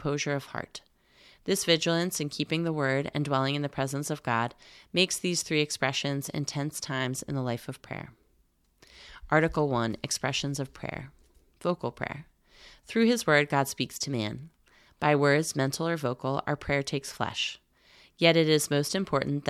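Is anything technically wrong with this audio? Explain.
No, nothing technically wrong turns up on listening to this speech recording.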